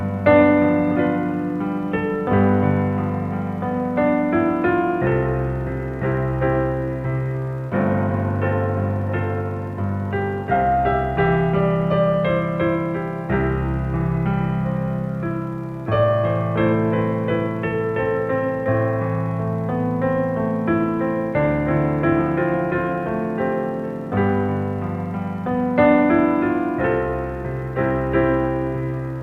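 Nothing stood out on listening; no technical problem could be heard anywhere in this audio.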